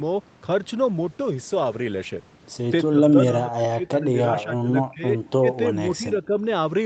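Speech over an Opus call path, band-limited at 8 kHz, with two faults. From 0.85 to 2.71 s a call bitrate drop makes the sound coarse and watery, most of all for about 1.8 s at its worst, which fits the encoder falling from 40 to 16 kbps after the bandwidth estimate fell. Between 2.91 and 5.18 s the speech then dips by roughly 20 dB for about 1.5 s in total. It drops again by roughly 30 dB in a brief 70 ms hole at 5.39 to 5.47 s and by roughly 10 dB across 5.69 to 6.37 s. This is likely speech suppressed in double talk, where the echo canceller cannot separate the near-end talker from the overlapping loudspeaker echo and attenuates the near-end talker along with it.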